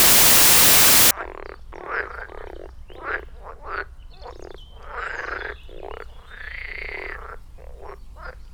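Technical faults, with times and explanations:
0.00–1.11 s, samples built from the wrong bytes: misassembled bytes turn low bits into loud, harsh broadband noise, a full-band spectrogram smear and a dense waveform.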